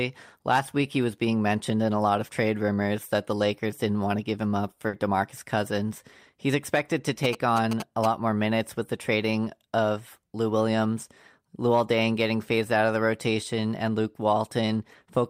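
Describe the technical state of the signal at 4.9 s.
At 4.9 s there is a burst of packet loss, running 4.87 to 4.95 s just after "to give him up". The receiver repeats the preceding sound and fades it over about 60 ms, then resumes with roughly 60 ms of audio skipped.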